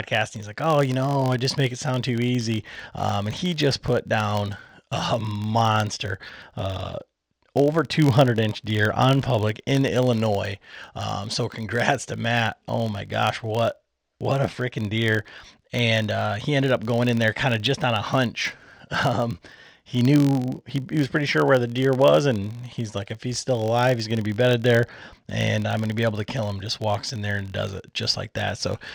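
From start to finish there's a low buzz at about 46.9 Hz riding under the speech, the classic sign of a filter restarted on every block. Each block, which fits a 1024-sample size, starts from cleared state and kicks off a small tick, and the buzz tracks the level.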